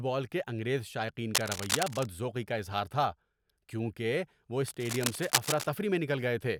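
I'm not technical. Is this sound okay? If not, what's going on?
No. A worn cable or connector was likely being moved, so its connection kept flickering and added cable scratch noise, a scratchy rustle as loud as the speech, from 1.35 to 2.08 s, right after "بال کے انگریز شائقین", and again from 4.68 to 5.67 s, after "اظہار تھا کیونکہ وہ".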